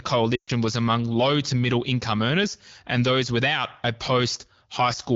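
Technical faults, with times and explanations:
0.35–0.50 s, lost AMR speech frames: the sound drops to near silence within two frames, with about 120 ms lost, returning weakly at "was among low to". Radio errors corrupted a run of frames (which fits six 20 ms frames), so the wideband decoder repeated the last good pitch and vocal tract settings with falling gain.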